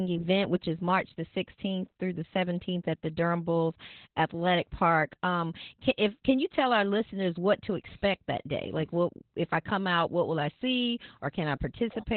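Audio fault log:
Throughout, Opus voice compression: the low bitrate points to narrowband SILK coding with coarse excitation, leaving muffled, hoarse, slightly robotic speech with nothing above 4.2 kHz.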